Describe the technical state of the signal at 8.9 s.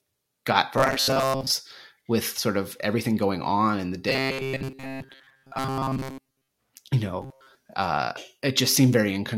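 At 8.9 s the signal is intact, with no audible technical fault at that moment.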